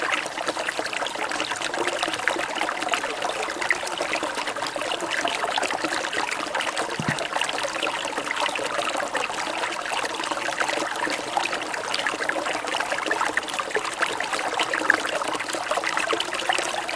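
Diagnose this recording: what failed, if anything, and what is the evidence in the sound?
Nothing here points to a failure at any stage of the chain, so there's nothing to diagnose in this recording of everyday sounds.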